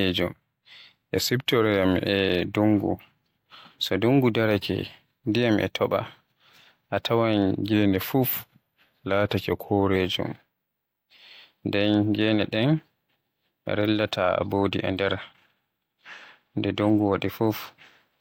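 At 1.14 s the speech suddenly slows by 6.2% and drops about a semitone flat until 2.06 s, then snaps back, and the same happens from 7.73 to 9.96 s. That's a drift correction step, likely a clock-matching resampler briefly jumping its rate to rebalance its buffer.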